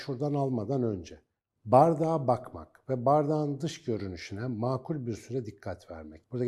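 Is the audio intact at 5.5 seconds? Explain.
Yes, at 5.5 seconds the speech plays through intact, with no dropout, click, distortion or other fault at that moment.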